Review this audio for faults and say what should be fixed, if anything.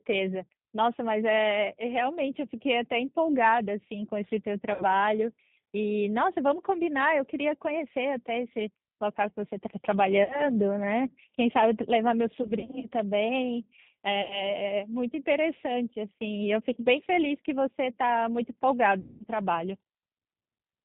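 The whole recording has passed through the G.729 codec at 8 kbit/s, and its damage is plainly audible. The speech sounds rough and slightly synthetic because the decoder rebuilds it from a vocal tract filter, a pitch predictor and a few pulses per 10 ms frame instead of the original waveform. On a spectrogram the content stops at a hard ceiling near 4 kHz, with empty space above. Using a wideband codec such as G.722 or Opus for the call would prevent this.

VoIP packet loss concealed by the speech codec occurs at 4.74 to 4.85 s, 10.24 to 10.56 s, 12.43 to 12.87 s, 14.22 to 14.51 s and 19.00 to 19.24 s. The gaps sound like a fading buzzy or noisy hold followed by weak recovery. The loss at 12.43 s is scattered across about 0.4 s in runs of up to 40 ms, and the longest total loss is 200 ms near 19.0 s. The losses fall in 20 ms steps, which fits 20 ms packets. On a spectrogram, harmonics smear flat and decay, and the waveform envelope sags before rebuilding. 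A larger jitter buffer with forward error correction, or a more reliable network path, would prevent this.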